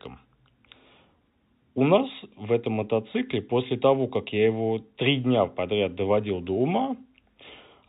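Speech carried over G.711 telephone coding, with nothing above 4 kHz and a faint level-following hiss well beneath the signal, shows no technical fault anywhere in the clip.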